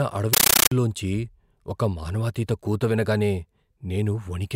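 From 0.33 to 0.72 s the speech is replaced by loud, chattering static: a compressed stream played as audio. An undecoded AC-3 bitstream is read as samples, giving 13.3 ms noise bursts and silent padding repeating at 31.25 Hz, consistent with a 640 kbps stream.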